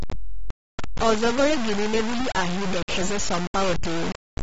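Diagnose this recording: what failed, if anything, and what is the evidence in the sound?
At the sample-format conversion stage, the speech carries a gritty, grainy distortion from start to finish. The grain follows the signal. It rises and falls with each syllable instead of sitting as a steady hiss. The error is roughly as loud as the speech itself. The coarseness points to about 3 bits. The likely cause is low bit depth without dither, with samples truncated to a few steps, so the error follows the waveform.

At the codec stage, nothing reaches above 7.7 kHz anywhere in the clip. The top of the spectrum is simply gone, so the speech sounds dull. Codec damage is plainly audible throughout, with a smeared texture on the sound. This fits AAC compression, AAC-LC at about 31 kbps. At a rate that low, the encoder lowers its cut-off and quantises its frequency lines coarsely against its hearing model.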